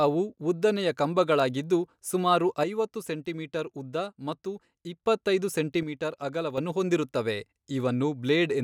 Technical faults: one channel drops out

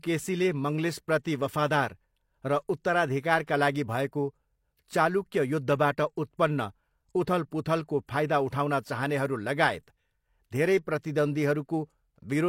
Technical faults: pre-echo

